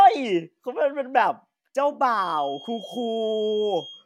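At 2.06 s a feedback whistle enters and continues to the end of the clip. A thin, steady tone at 3.2 kHz sits behind the speech, roughly 20 dB below it, swelling and fading slowly in level. The likely cause is a loudspeaker-to-microphone loop running at the edge of instability. The loop gain at that one frequency is just high enough to sustain a ring, but not high enough for it to build into a howl.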